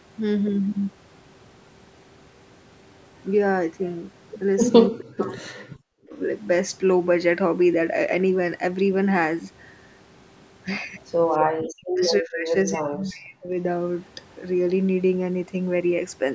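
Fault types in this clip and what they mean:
Speech suppressed in double talk: The speech ducks sharply from 4.9 to 6.13 s and again from 11.71 to 13.57 s, dropping by around 40 dB at its deepest. This is likely an echo canceller treating overlapping talk as loudspeaker echo and attenuating it.
Echo leak: A brief, very faint delayed copy of the speech appears between 11.32 and 11.38 s, trailing by 256 ms at roughly 35 dB below it. This is likely loudspeaker pickup that the echo canceller failed to remove and sent back.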